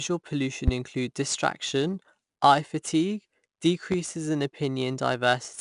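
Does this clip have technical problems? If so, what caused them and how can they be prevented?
Yes. The speech was encoded with 4-bit ADPCM, which codes each sample as a coarse step from a prediction. The quantising error becomes level-following grit on loud syllables and rough attacks, and nothing above 10.6 kHz survives, which fits a sample rate near 22 kHz at about 89 kbps. Prevent this by recording and storing with linear PCM or a modern codec at a higher rate.

A loud pop sits over the speech at 0.68 to 0.71 s, peaking some 15 dB above it, and another at 3.92 to 3.95 s, about 10 dB above. Each is a single sharp click with the speech continuing underneath, likely from a voltage transient such as a switch, plug or static discharge. Prevent this by securing connections and grounding equipment before recording.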